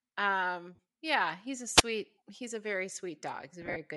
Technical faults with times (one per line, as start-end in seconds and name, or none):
0.00-3.96 Bluetooth LC3 compression
0.75-0.79 lost LE Audio frames
1.76-1.83 wireless microphone squelch dropout
3.62-3.76 lost LE Audio frames